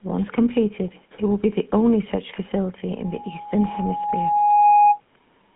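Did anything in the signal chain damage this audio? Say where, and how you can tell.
Yes. The codec stage did it, throughout. The speech has the buzzy, gravelly roughness of the GSM full-rate codec. Nothing exists above 3.8 kHz. A vocal-tract model driven by sparse, regular pulses causes the buzz, which fits a 13 kbps stream.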